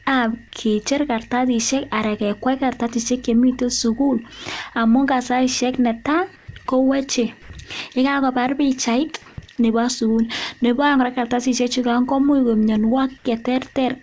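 At 6.36 to 6.48 s the real background in a pause, sitting about 31 dB below the loud parts of the speech, gets swapped for 120 ms of flat, featureless hiss that's about 3 dB quieter. That's comfort noise in place of the background. Most likely the sender's voice detector heard no speech and stopped sending, so the receiver filled the gap with synthetic noise shaped roughly like the room, losing all its texture until real audio resumed.

Then at 7.42 to 7.50 s, right before "yekakobar pichait nebo suun", there's a short 80 ms stretch of that same steady noise, and about 30 ms of actual sound is missing from it. That's sound dropped by the voice detector. The likely story is that the detector mistook that sound for background and cut transmission too early, so the sound gives way to steady noise until it triggered again. Both sit on top of a band-limited call sound with nothing above 8 kHz, which fits G.722 at 64 kbps.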